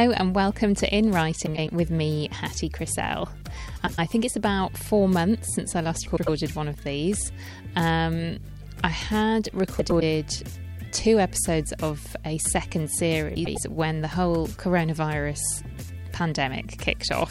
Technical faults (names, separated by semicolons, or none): frames out of order